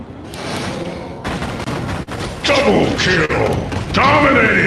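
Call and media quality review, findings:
Clock drift between sender and receiver: small timing hiccups scattered unevenly across the whole clip. Sender's clock seems to run about 3% slow against the receiver, so the jitter buffer keeps draining and the receiver patches the gaps by repeating tiny slices. Worth checking sender-side resampling or clock sync. Audio sits on what sounds like an Opus call path with top end stopping near 12 kHz.

Short stall from a late packet: sound briefly held and smeared at 2.03–2.09 s (about 44 ms stretched) and again at 3.25–3.31 s (about 39 ms). Packet showed up late, jitter buffer ran dry, receiver stretched the last bit of audio until it arrived, then carried on. Nothing lost, just a slight drag each time. Fits the slow sender starving the buffer.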